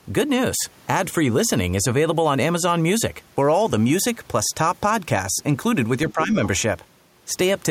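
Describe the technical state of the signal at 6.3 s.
At 6.3 s the speech is caught in speech suppressed in double talk (6.12–6.4 s): the waveform envelope sags by roughly 10 dB, likely an echo canceller turning down its own talker along with the loudspeaker echo.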